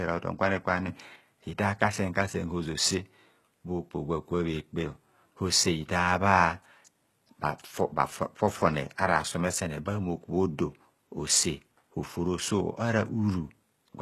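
The clip is speech. Throughout, the top of the spectrum is rebuilt rather than real. There is nothing above 12.3 kHz. The treble below that sounds synthetic, and the codec damage is plainly audible. This points to HE-AAC compression at a low bitrate, likely around 16 kbps. HE-AAC sends only the lower band in full. It fills in the treble by copying lower bands upward and shaping them with a rough envelope. Harmonics then fail to line up across the crossover, so the s sounds come out gritty or lispy. At 0.88 s there is a sudden gain jump of about 6 dB. It lasts until 1.16 s, when the level drops back. The speech and the background noise jump together, which is what a digital gain change without a ramp does. The likely cause is a gain setting or bit shift applied at a single sample and then removed.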